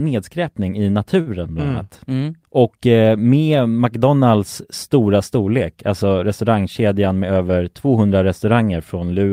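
At 1.21 to 1.28 s there is a short stall from a late packet. The jitter buffer ran dry and the receiver held the last sound for 55 ms, losing nothing but shifting playback 55 ms later. It sounds like a held syllable with a slight buzz or dip, seen as repeated identical waveform cycles and flat, smeared spectrogram bands.

From 7.07 to 7.38 s a jitter buffer speed-up trims the surplus delay by repeatedly cutting out pitch-period-sized pieces, about 50 ms in all. The sound runs at 114% speed with unchanged pitch and feels hurried. On a spectrogram the harmonics stay level while the syllables crowd closer together.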